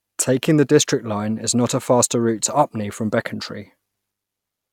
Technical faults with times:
none

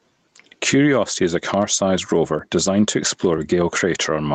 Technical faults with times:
0.00-4.35 gain pumping
0.39-3.38 periodic USB or driver dropouts

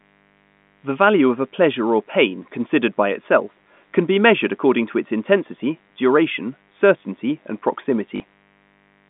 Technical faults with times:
0.00-9.10 mains buzz
8.16-8.20 packet loss with last packet repeated

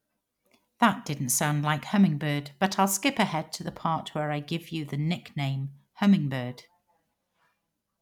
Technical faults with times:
none

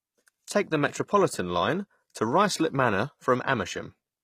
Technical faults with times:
0.00-4.24 HE-AAC compression

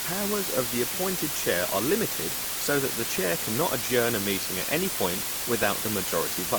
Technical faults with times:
0.00-6.58 low bit depth with dither

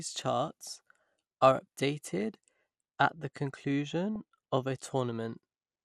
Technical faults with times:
0.00-5.85 MP2 compression
0.49 DAB burbling
2.19-2.26 DAB burbling
2.73-4.74 de-emphasis applied wrongly
4.16 DAB burbling

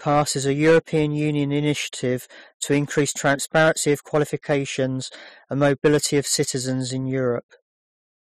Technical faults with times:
0.08-1.02 hard clipping
2.71-4.84 hard clipping
5.62-6.41 hard clipping

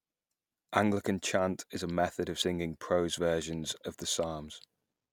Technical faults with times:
2.41-2.45 damaged data in a compressed stream

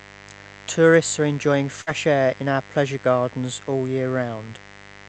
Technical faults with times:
0.00-5.08 mains buzz
1.81-1.90 burst of packet loss

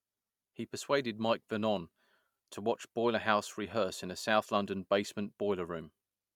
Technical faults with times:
none

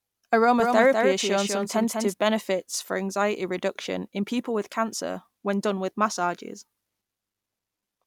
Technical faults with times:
0.60-2.14 doubled audio track

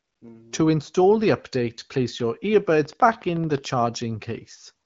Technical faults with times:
0.00-0.21 AMR comfort noise
2.70-3.96 train of clicks

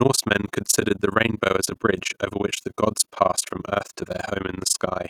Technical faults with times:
0.00-5.09 overlap-add ripple

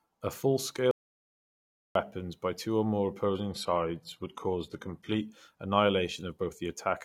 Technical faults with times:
0.91-1.95 audio dropout to silence
3.26-5.26 adaptive stream at a lower bitrate

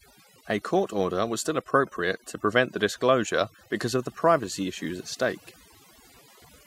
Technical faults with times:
0.00-6.67 overdone noise removal

